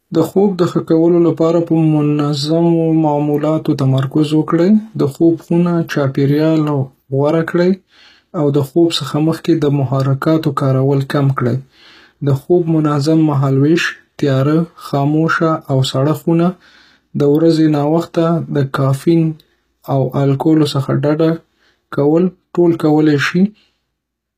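HE-AAC compression likely runs throughout: treble stops near 14.9 kHz and is rebuilt from copied lower bands, so s sounds turn gritty and metallic, consistent with about 20 kbps.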